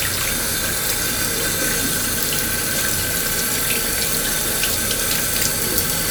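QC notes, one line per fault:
4.63 to 6.00 s, hard clipping: the sound is driven about 7 dB past what the stage can pass, so peaks get sliced flat and add harmonics far up the spectrum.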